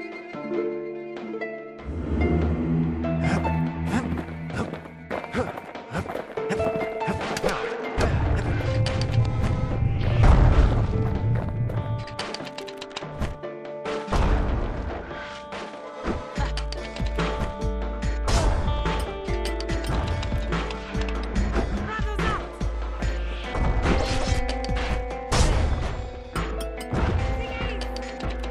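A 5 ms block of digital silence interrupts the audio at 6.65 s. The signal drops out and returns abruptly, with no fade on either side. A gap this short is heard as a brief tick or dip, not as an audible hole. The dropout points to either the playback or processing chain failing to deliver samples to the output buffer in time, or a calculation producing invalid values that were replaced with silence.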